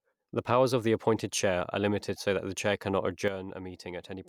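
At 3.28 s, right after "that the chair cannot", a sudden gain jump drops the speech and its background noise together by about 9 dB until the end. The likely cause is a gain change applied without a ramp. Waveform amplitude steps down abruptly; the spectrogram dims uniformly across all frequencies.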